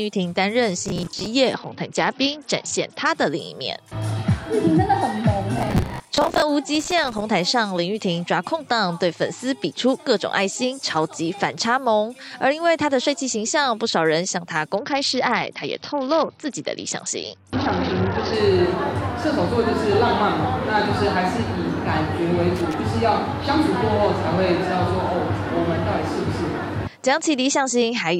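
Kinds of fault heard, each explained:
Processor overload crackle: The processor falls behind and misses many short audio deadlines in a row. Each missed slot replays a scrap of old audio with hard edges, so the sound turns gritty and torn. It happens from 0.86 to 1.26 s and again, longer, from 5.58 to 6.42 s. The texture fits buffers of roughly 10 ms, and the second burst holds many more repeats.
Bluetooth SBC bit pool drop: The wireless link gets congested, so the sender cuts the SBC bit pool to keep audio flowing. The treble dulls sharply, and coarse, gritty noise rises across what remains. The drop is deep, which fits a bit pool falling from 31 to 7, near 61 kbps. It lasts from 1.53 to 3.06 s, then from 14.75 to 18.34 s, recovering each time.
Loose connector crackle: A worn or dirty contact makes and breaks rapidly, chopping the signal on and off. The result is an irregular burst of scratchy crackle, unlike the steady grit of the overload bursts. 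It is heard from 6.74 to 7.22 s, just after the second overload burst, and again briefly from 22.56 to 22.77 s.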